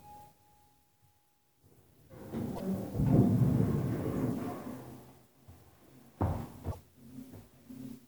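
A recording of sounds, with damaged data in a compressed stream at 2.52 to 2.60 s and again at 6.68 to 6.76 s, each a brief glitch of about 80 ms. Corrupted bytes make the decoder misread frames and resynchronise.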